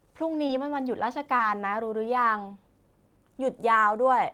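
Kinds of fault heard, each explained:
Short concealed packet loss: twice, at 0.47 to 0.51 s and 1.37 to 1.41 s, about 20 ms of speech failed to reach the decoder in time. The receiver bridged each gap by extending the preceding sound, then blended back, leaving a brief smear.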